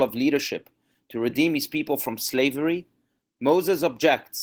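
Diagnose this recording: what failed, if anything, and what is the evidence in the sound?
The codec stage failed: Opus voice compression runs throughout, leaving the speech hoarse and faintly robotic. Coarse excitation coding in hybrid mode suggests a low bitrate, around 16 kbps.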